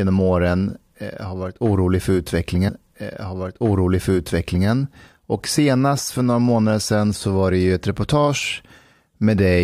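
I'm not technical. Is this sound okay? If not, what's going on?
No. From 2.67 s to 4.67 s, right after "har varit orolig för", there is a stream segment repeated fault: the player received the same chunk of speech twice, so about 2.0 s plays again, with a small blip where it jumps back.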